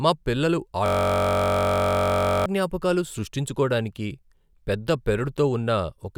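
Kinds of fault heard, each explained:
System hang loop: the playback system stalled and the hardware kept replaying its ring buffer, so after "మా పిల్లలు" one 21.33 ms slice repeats exactly, some 75 times, from 0.86 to 2.46 s, a steady 46.9 Hz buzz that fits a 1024-sample buffer, before "జ్ఞాపకాలు సృష్టించుకోడానికి పెద్ద".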